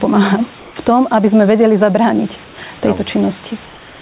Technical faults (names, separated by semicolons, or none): gain pumping; comfort noise in place of the background